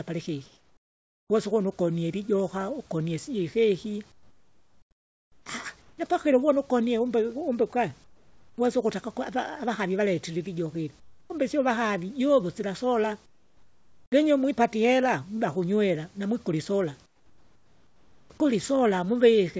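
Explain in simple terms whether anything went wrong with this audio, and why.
Comfort noise in place of the background appears in the speech pauses at 0.46–1.30, 4.12–5.46, 5.82–5.98, 8.04–8.58, 11.00–11.30, 13.26–14.12 and 17.06–18.30 s. The real room sound gives way to a flat, quieter hiss, likely because the sender stopped transmitting during silence.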